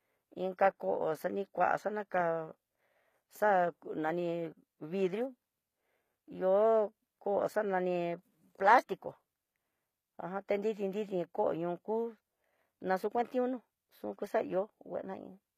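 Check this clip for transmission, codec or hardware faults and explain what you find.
One fault runs through the whole speech clip. The s sounds come out gritty and metallic, with treble that stays bright but doesn't sit naturally with the lower voice, and nothing reaches above 14.9 kHz. The likely cause is HE-AAC compression at a low rate, which fits something around 20 kbps. Only the lower spectrum is coded; the top is rebuilt by copying lower bands upward under a coarse envelope, so harmonics misalign at the crossover.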